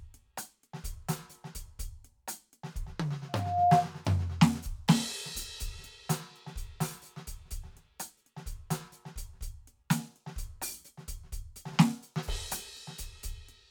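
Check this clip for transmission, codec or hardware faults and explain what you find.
There is one hardware fault in this music clip: loudspeaker feedback squeal from 3.29 to 3.89 s. A microphone picked up the loudspeaker it was feeding, and at 706 Hz the round-trip gain through that loop rose above one, so that frequency reinforced itself on each pass. It is heard as a pure tone that swells over roughly 0.4 s into a piercing squeal, sitting about ten decibels above the music.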